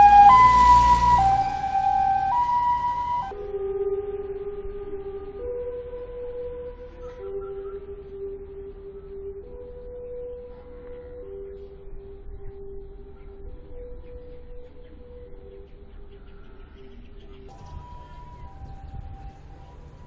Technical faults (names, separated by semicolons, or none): wrong sample rate